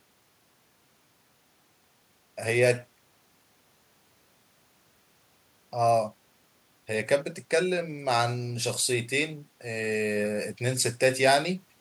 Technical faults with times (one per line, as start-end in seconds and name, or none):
none